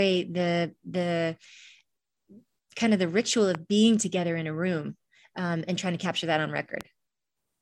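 A voltage pulse, likely from a plug or switch, twice jumps onto the signal, giving a loud pop at 3.55–3.57 s after "kind of the ritual" and at 6.81–6.83 s after "to capture that on". Each sharp pop peaks about 10 dB above the speech, which continues underneath.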